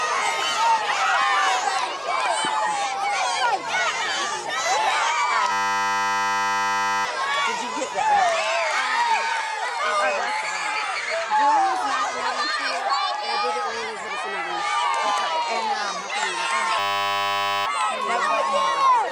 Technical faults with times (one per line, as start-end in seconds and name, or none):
5.52-7.05 system hang loop
16.79-17.66 system hang loop